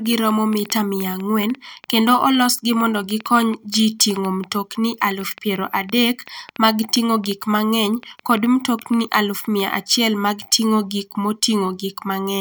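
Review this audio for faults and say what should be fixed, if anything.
A train of clicks runs from 0.06 s to 9.61 s: around fifty similar pulses at an irregular 4.9 per second, peaking about 5 dB above the speech and audible in pauses. This is likely interference or a faulty connection or power supply. Shield and reroute cables away from nearby equipment and check the interface connection and drivers before recording.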